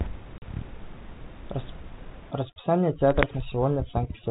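Speech over what sounds like a telephone-band ADPCM link, with room noise sitting about 18 dB under the voice and the light coding grain that fits 32 kbit/s G.726. At 0.38 s a hard-edged 40 ms hole of silence cuts in, ending at 0.42 s, and the speech resumes slightly distorted before settling. This is packet loss on an ADPCM call, about two packets dropped, which knocked the decoder's adaptive predictor and step size out of step with the sender's until they re-converged. From 2.31 s to the end the background collapses to near silence flecked with twinkling specks. That is overdone noise removal: bands falling near the estimated noise floor are driven down hard, taking quieter parts of the speech with them.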